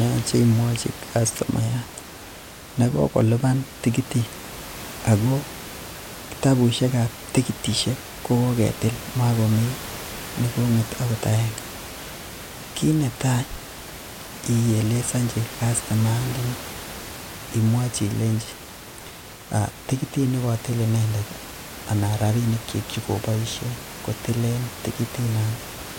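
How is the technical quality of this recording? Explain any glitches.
No glitches can be heard anywhere in the recording. The only background is the room's own noise, sitting about 15 dB below the speech, which belongs to the recording space rather than to the system.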